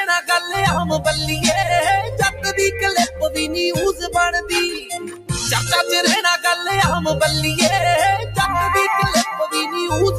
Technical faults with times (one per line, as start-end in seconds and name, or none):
0.00-10.18 noise suppressor applied to music or sounds
2.05-2.44 sound cut by the noise suppressor
3.07-3.37 sound cut by the noise suppressor
3.93-4.15 sound cut by the noise suppressor
4.79-5.31 sound cut by the noise suppressor